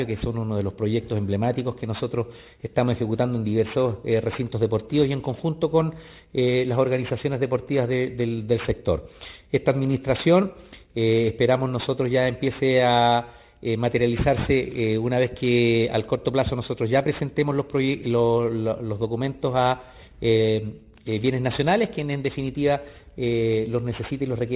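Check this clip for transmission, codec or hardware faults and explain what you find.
One fault runs through the whole clip: aliasing. The audio points to a drop to an 8 kHz rate without an anti-alias filter, so content above 4 kHz folds back below it at around 20 dB under the signal, giving gritty, metallic high frequencies packed hard against the band edge.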